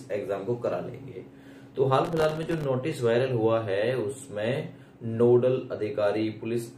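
From 2.05 to 2.64 s the processor falls behind and misses dozens of its tiny deadlines, each buffer only a millisecond or two long. Every miss drops in a hard-edged gap of silence, heard as a gritty burst of processor overload crackle.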